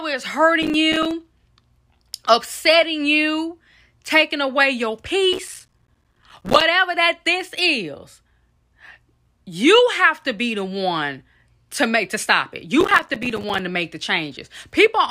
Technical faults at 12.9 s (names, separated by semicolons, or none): processor overload crackle